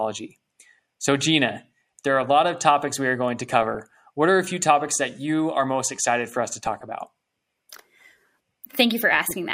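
Speech, marred by DAB burbling in three bursts: 3.48 to 3.93 s, 6.52 to 6.95 s, and 9.15 to 9.34 s. Weak reception lets a fraction of a percent of bits through uncorrected. Corrupted samples put short noise blips in single sub-bands, and corrupted scale factors make sub-bands jump in level for up to a frame.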